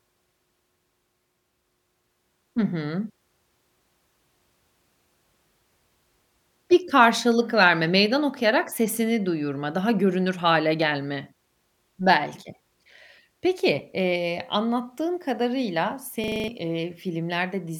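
A harsh, rattling stutter breaks into this speech recording from 16.24 to 16.48 s, right after "anlattığın kadarıyla". The same 40 ms fragment repeats six times at 25 Hz, producing a coarse machine-gun buzz. This is a system hang loop. The computer or audio driver stalled while the sound hardware kept replaying one short stretch of its ring buffer, which suggests a buffer about 40 ms long. Around a fifth of a second of the real audio is lost.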